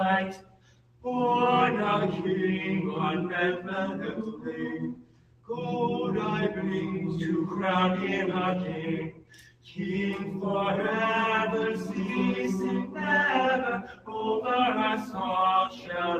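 A speech-style noise suppressor runs on this sound throughout, treating held tones and tails as noise. Level swings by roughly 10 dB, so it pumps. The sound cut by the noise suppressor sinks at 0.37–1.05 s, 4.93–5.49 s, 9.11–9.74 s and 13.81–14.14 s, by up to about 12 dB, and at 15.69–15.89 s by about 8 dB.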